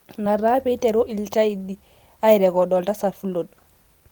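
Throughout the recording there is clock drift between sender and receiver: the sending side's audio clock runs roughly 5 percent faster than the receiving side's. Samples therefore arrive a little faster than they are played out, and the jitter buffer keeps filling. The receiver has to shed material to keep its delay in check. The ear hears a subtle rushing in the speech, with the tempo never quite settling.

From 0.26 s to 4.01 s the receiver makes repeated timing corrections to keep pace, running at about 105 percent speed overall. Because the sender is fast, each correction drops a short slice of audio rather than repeating one. The cuts are all in the same direction but fall at uneven intervals, so the speech carries small hiccups and a slightly lurching rhythm. On a waveform these show as tiny discontinuities where the envelope jumps. On a spectrogram they appear as faint vertical seams or abrupt shifts in harmonic contours, scattered irregularly across that stretch.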